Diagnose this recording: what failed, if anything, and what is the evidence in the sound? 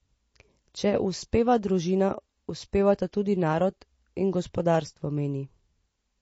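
The codec stage is where this went wrong, and it's there for the whole clip. The speech sounds band-limited, with nothing above about 7.7 kHz, and the compression damage is plainly audible throughout. That's the signature of likely MP3 compression starved of bits: the encoder drops the treble at a fixed cut-off and discards weak frequency lines to save space, which fits a low bitrate somewhere around 32 kbps.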